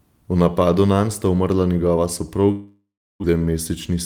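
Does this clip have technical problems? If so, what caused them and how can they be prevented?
Yes. From 2.51 to 3.39 s the speech cuts out: the receiver stretches the last sound into a fading buzz, then silence, and the audio returns with about 660 ms gone, likely a long network dropout. A steadier connection or bigger jitter buffer would help prevent it.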